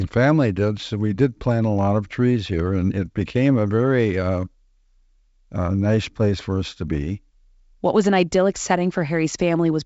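No technical faults are audible.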